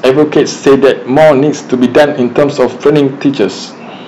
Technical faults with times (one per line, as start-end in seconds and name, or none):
0.00-4.07 hard clipping